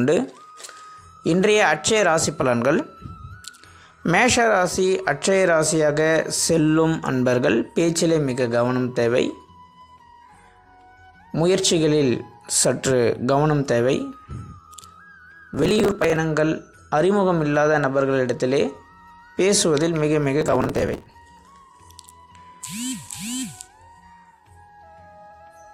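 Processor overload crackle occurs from 15.54 to 16.16 s and again from 20.41 to 21.14 s. Each time the processor misses deadline after deadline, skipping tiny buffers, roughly 5 ms each, so dozens of hard-edged gaps pile up into a gritty, tearing crackle that stops once the load eases.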